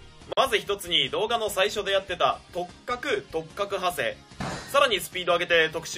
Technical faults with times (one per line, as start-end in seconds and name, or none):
0.33-0.37 gap at a join of encoded pieces